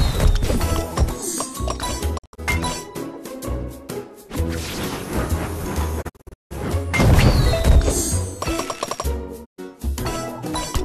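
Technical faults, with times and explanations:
2.17 to 2.40 s, 6.01 to 6.53 s and 9.44 to 9.60 s: digital broadcast dropout. The receiver lost valid frames and muted, fading out and back in over about 20 ms, so whatever was sent during each gap is gone. The first two are scattered clusters of short holes, with longest runs of 72 ms and 168 ms. The last is one 120 ms gap. On a spectrogram these appear as blank vertical bands across all frequencies. The waveform drops to silence between brief tapers.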